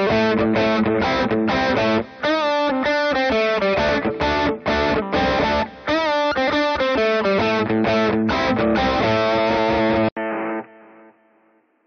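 At 10.09 s, after a brief 80 ms gap, the sound turns dull and boxy, likely an input switched to a poorer device. The spectrogram shows nothing above 3.1 kHz, with a faint new noise floor. The waveform drops by roughly 5 dB until the end.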